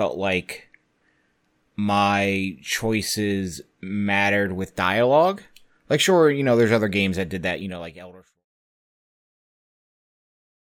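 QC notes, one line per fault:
No faults found; the speech level eases down from roughly 7 s to silence by 8.46 s as a smooth editorial fade-out with no click or hard edge.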